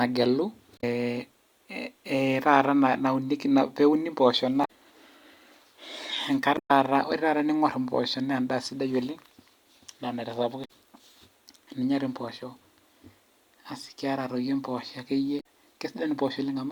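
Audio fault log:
0.75–0.84 s, 4.61–4.70 s, 6.54–6.71 s (just before "ore taata"), 10.61–10.70 s, 15.37–15.44 s: damaged data in a compressed stream. Each is a brief chirp or squawk lasting roughly 0.07–0.17 s, where the speech cuts out. Corrupted bytes made the decoder misread frames and lose sync until it found the next valid frame header.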